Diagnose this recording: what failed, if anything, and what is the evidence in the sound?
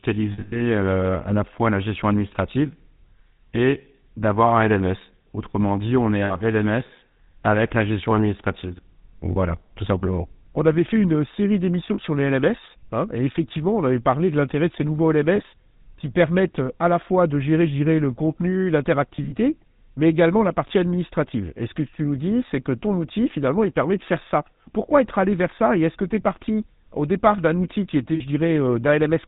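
Codec stage: GSM full-rate coding runs throughout, giving plainly audible buzzy, gravelly speech with nothing above 4 kHz, as a pulse-excited vocal-tract model at 13 kbps.

Network: lost GSM frames at 0.32 s (before "à la fois la"), 6.24, 9.32, 11.94, 15.36, 19.16, 20.68 and 28.14 s ring metallically as the decoder repeats the last good frame.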